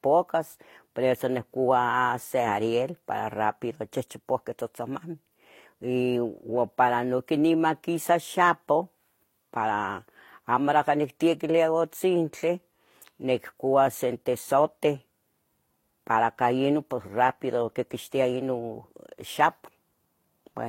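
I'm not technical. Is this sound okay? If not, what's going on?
No, not quite. The whole recording, from start to finish, has the marks of transcoding between lossy codecs: the speech was most likely squeezed by one compression format and then again by another, so both sets of smearing stack up, and nothing above 16.2 kHz survives.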